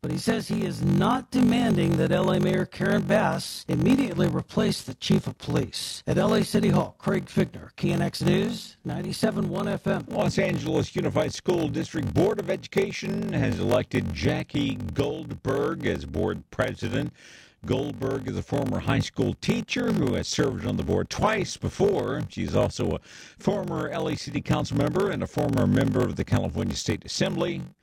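A block size mismatch (padded) runs throughout: each block written is shorter than the block read next, and the remainder is zero-filled. The gaps buzz at 46.9 Hz, which fits a 1024-sample read, and speech plays at 0.861 times normal speed at about its normal pitch.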